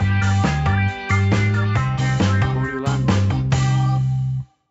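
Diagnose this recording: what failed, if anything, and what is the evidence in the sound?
No failures detected here.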